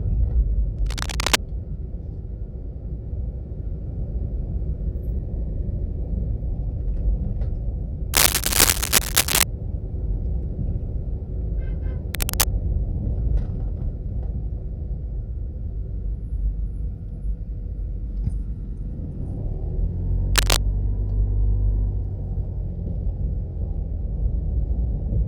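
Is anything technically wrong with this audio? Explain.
Yes. Cable scratch noise appears four times: 0.79–1.39 s, 8.14–9.43 s, 12.14–12.47 s and 20.36–20.57 s. Each is a burst of scratchy, rustling noise laid over the sound, roughly as loud as the signal in the first and third, somewhat louder in the second and fourth. The likely cause is a worn cable or connector shifting and changing its contact resistance. On a spectrogram these show as dense, broadband patches; the waveform shows jagged, uneven spikes.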